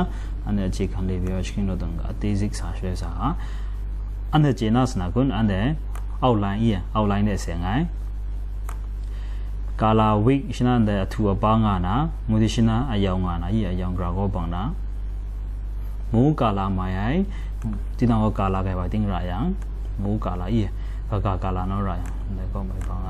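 Nothing in the audio stood out as a technical problem on listening.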